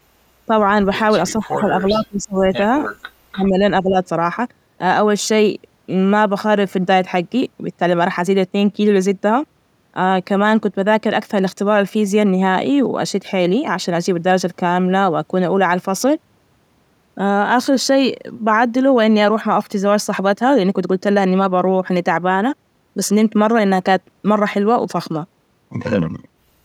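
From 1.39 to 2.52 s the speech dips by as much as about 20 dB, most likely because it was suppressed during double talk: an echo canceller mistook the talker for loudspeaker echo and turned it down. On a waveform the envelope visibly pinches.

At 2.41 to 2.45 s a faint echo leak appears, about 30 dB below the speech and delayed 447 ms, likely residual loudspeaker pickup that the canceller missed. It shows as a weak, delayed copy of earlier speech.

Shorter suppressions follow at 3.31 to 3.57 s, about 20 dB deep, and 3.82 to 3.96 s, about 10 dB.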